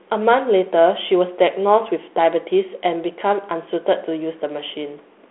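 Nothing technically wrong turns up in this speech clip, just ordinary telephone-band sound.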